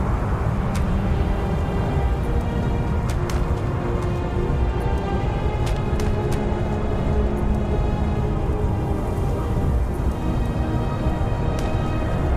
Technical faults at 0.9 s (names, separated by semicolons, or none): none